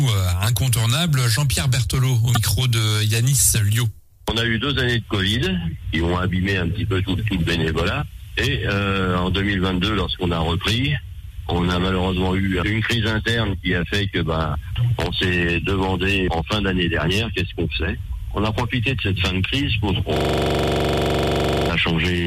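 Damaged data in the compressed stream appears from 2.32 to 2.37 s. Corrupted bytes there left the decoder unable to read those frames, so it lost sync and searched for the next valid header. The result is a brief glitch lasting about 50 ms.

A system hang loop runs from 20.17 to 21.69 s. The computer stalled while the sound hardware kept replaying one 42.67 ms stretch of its ring buffer, which fits a 2048-sample buffer. That slice repeats about 36 times at 23.4 Hz, producing a rapid, buzzing stutter.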